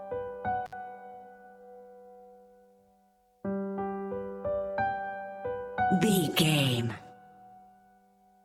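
At 0.66 s the sound drops out abruptly, with a crackle at each edge. This is an intermittent contact: a loose cable or plug briefly opened. The line stays open for about 63 ms, leaving faint hiss, before contact returns at 0.73 s.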